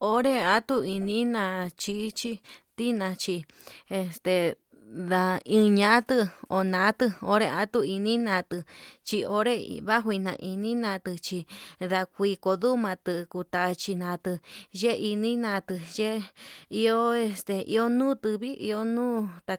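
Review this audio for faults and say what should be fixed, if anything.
No faults turned up in this audio, so nothing needs to be fixed.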